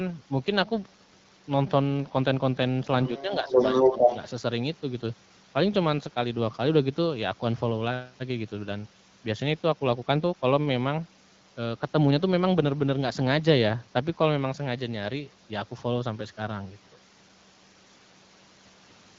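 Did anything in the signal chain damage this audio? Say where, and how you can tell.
Yes. The damage is in the call processing, where the echo canceller most likely failed to remove the far end's loudspeaker sound from the microphone. The result is the other side's voice leaking through: a faint trace from 3.03 to 3.23 s, about 20 dB under the talker, then a stronger stretch from 3.44 to 4.17 s, about 5 dB louder than the talker.

The same canceller likely also produces speech suppressed in double talk. With both sides talking at once, it cannot tell the local talker from the returning echo, so it turns everything down. The talker's level dips by about 5 dB from 3.25 to 3.59 s and again from 3.9 to 4.11 s, around 0.4 s of attenuation in all, overlapping the loudest leak. The AMR-WB wideband coding at 12.65 kbit/s underneath carries only light codec wear.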